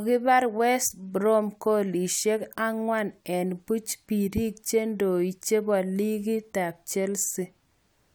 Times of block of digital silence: none

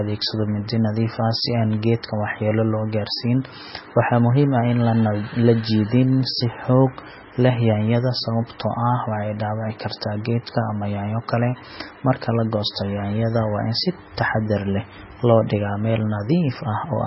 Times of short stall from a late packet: none

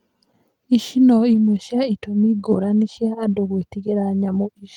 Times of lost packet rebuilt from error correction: 1.31-1.37

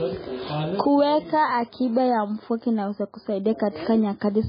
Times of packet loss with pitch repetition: none

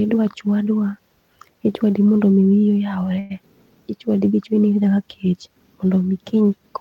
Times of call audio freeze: 3.19-3.32

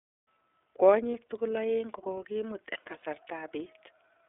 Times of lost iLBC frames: 1.11-1.15, 3.00-3.03

